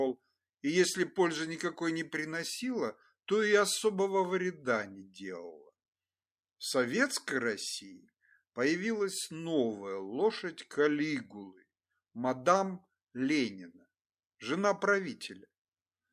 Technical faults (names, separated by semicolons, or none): none